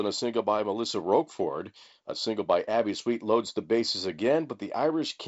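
Nothing stood out on listening to this speech, which is carried over G.722 wideband telephone coding at 48 kbit/s, with no content above about 7.7 kHz.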